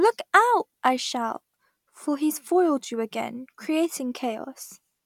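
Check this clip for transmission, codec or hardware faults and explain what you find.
No transmission, codec or hardware fault can be heard anywhere in the speech, and the signal stays continuous and technically intact throughout.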